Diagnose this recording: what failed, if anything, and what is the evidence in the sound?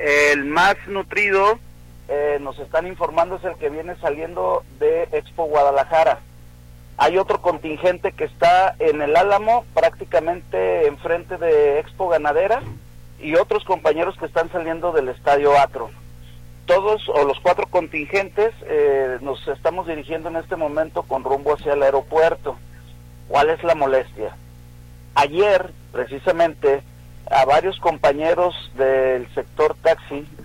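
A steady low 60 Hz tone with some low harmonics runs throughout, about 25 dB below the sound: mains hum from a ground loop or a nearby transformer coupling into the analogue wiring.

Quiet passages turn gritty and grainy throughout, the distortion tracking the sound at about -45 dB. This is likely a sample-format conversion to around 9 bits, rounded without dither.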